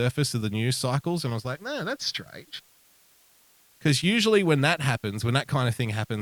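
The speech is quantised to very few bits, which fits 9-bit resolution, with dither, producing low bit depth with dither: a steady, even hiss throughout, around 35 dB below the voice.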